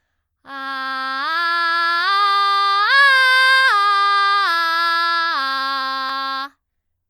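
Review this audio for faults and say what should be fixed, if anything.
No faults stand out in this music, so nothing needs to be fixed.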